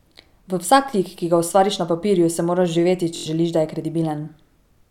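At 3.16 to 3.27 s, a Bluetooth stutter: lost packets made the receiver loop one short slice, a buzz before "želiš da je", drawn as identical repeating waveform blocks.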